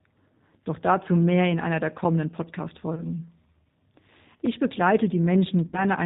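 The whole speech clip passes through the G.729 codec at 8 kbit/s. Nothing above 4 kHz survives, and the voice sounds plainly rough and synthetic.

At 2.95 s, about 20 ms of audio goes missing, which fits one lost packet. This is VoIP packet loss concealed by the speech codec. The decoder stretches its last frame into a fading buzz or coloured noise, and the sound stays weak until 3.07 s.

At 4.46 s, a block of digital silence cuts in. The sound drops out for about 5 ms and returns abruptly, which fits a 256-sample buffer left unfilled. It is heard as a tick or dip.

From 5.67 s to 5.85 s, a longer concealed loss follows. About 60 ms are missing, which points to three packets. The extrapolated sound fades further and takes longer to recover.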